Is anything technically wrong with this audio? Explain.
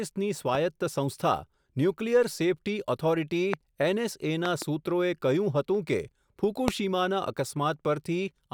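Yes. Loud pops, sharp thumps standing up to about 20 dB above the speech, land at 0.55–0.57, 3.54–3.56, 4.46–4.64 (a double pop) and 6.68–6.70 s, with the speech continuing underneath. Each is likely a sudden voltage pulse from a switch, plug, static or driver glitch added to the signal.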